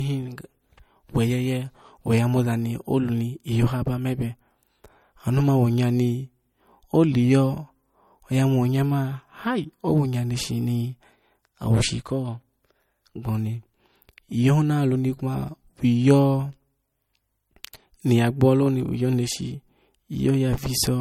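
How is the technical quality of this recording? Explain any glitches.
The technical quality is limited by a single fault present for the whole duration of the speech: low-bitrate audio saved at a high bitrate. Throughout, the recording carries the smeared, swirly artefacts of heavy MP3 compression, and nothing is present above 18 kHz. The likely cause is audio first encoded as a low-bitrate MP3, in the region of 48 kbit/s, then re-encoded as a high-bitrate MP3 at around 320 kbit/s. The second pass enlarges the file but cannot rebuild detail the first encoder discarded, so those losses remain audible.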